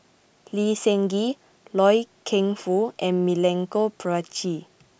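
No technical faults are present in the recorded speech, and the signal holds steady throughout.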